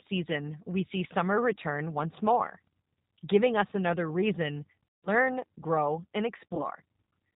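Across the whole recording, G.729 codec damage is plainly audible: a rough, synthetic edge and a spectrogram empty above 4 kHz, consistent with G.729A at 8 kbit/s.

From 4.87 to 5.09 s, just after "giving us another reason", VoIP packet loss concealed by the speech codec fills about 160 ms with a fading extrapolation. On the spectrogram, the harmonics appear frozen and flat until "grow and".

From 6.37 to 6.64 s, after "grow and", about 80 ms of the same loss is scattered over 200 ms, with the longest gap 40 ms. This leaves brief dips in the waveform envelope.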